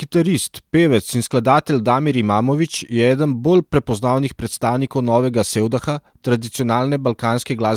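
A speech recording with nothing technically wrong to report.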